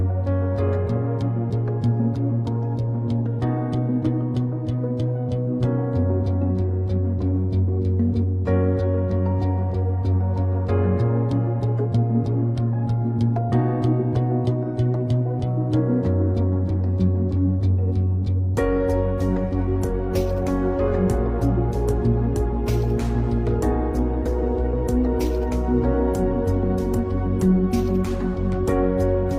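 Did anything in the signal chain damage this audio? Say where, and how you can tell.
No, nothing along the signal chain has left an audible mark on this recording. No stage, from capture through to playback, shows any damage that can be heard.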